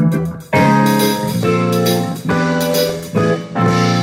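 From 2.75 to 3.00 s a burbling texture breaks over the sound, as narrow bands of the spectrum jump up and down in level from one instant to the next. This is DAB burbling, caused by weak reception letting bit errors, on the order of a fifth of a percent, slip past error correction into the MP2 data. Corrupted samples and scale factors throw individual sub-bands off for up to a frame at a time, across 14 frames.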